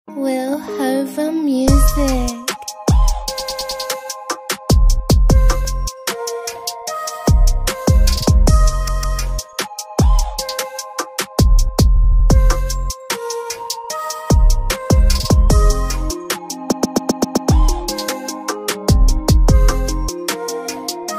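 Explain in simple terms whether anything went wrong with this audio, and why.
The sound stutters four times, replaying a short chunk back to back: at 3.38 s, 8.87 s, 11.95 s and 16.71 s, the last lasting about 0.8 s. These are repeated frames: the same bit of compressed audio was saved or sent more than once, so it plays again.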